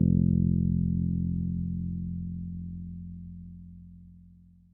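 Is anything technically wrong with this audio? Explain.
No, nothing is technically wrong with this audio.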